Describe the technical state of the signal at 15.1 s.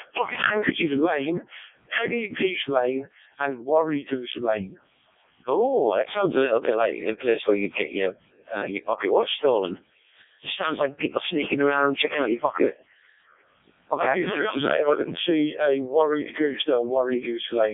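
At 15.1 s, as throughout, Codec 2 vocoder resynthesis makes the speech robotic and buzzy, with heavy damage fitting roughly 0.7 kbit/s; the spectrogram shows nothing above 3.7 kHz.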